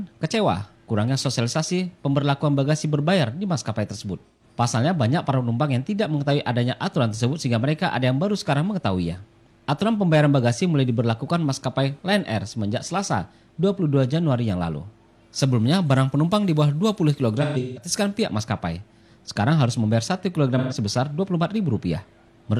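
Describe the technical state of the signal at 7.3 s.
The signal at 7.3 s is intact, with no dropout, distortion, or other fault at that moment.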